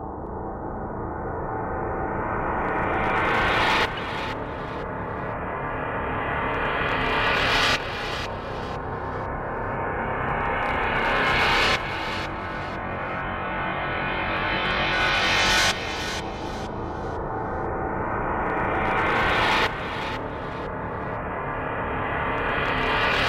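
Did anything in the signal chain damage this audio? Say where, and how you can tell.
Yes. Compressed frames were skipped at the codec stage. Jumps at 3.97 s and 16.19 s skip ahead about 20 and 50 ms. Whole frames are not played.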